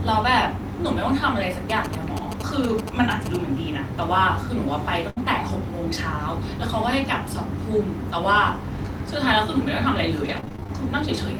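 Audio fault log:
1.70–3.36 s, GSM signalling bursts: A galloping dit-dit-dit of short buzzes cuts across the speech, sitting roughly 10 dB below it. The buzz pitch is about 217 Hz, the rate at which a 2G handset pulses its transmitter. A nearby phone in signalling mode was sending short groups of radio bursts, and the audio circuitry rectified that radio energy into sound. The stop-start grouping of these bursts gives the characteristic gallop.
5.10–5.18 s, burst of packet loss: The speech briefly gives way to a continuation of the last sound that fades out, then jumps ahead with a piece missing. A gap of roughly 65 ms opened where packets were lost or arrived too late to play. The receiver filled that hole by extending the last bit of audio and turning it down as the gap went on. When playback resumed, about 60 ms of the original speech had been skipped.
10.24–10.70 s, repeated packet loss (robotic sound): Across this half-second the speech turns choppy, with rapid stutters and small chunks dropped out. 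Packets went missing over and over, each gap no longer than 22 ms. Every hole was patched by continuing the previous sound, and the next loss followed quickly, so about 30% of the span is concealment rather than real speech. Around 140 ms was filled in and 160 ms of the original is gone.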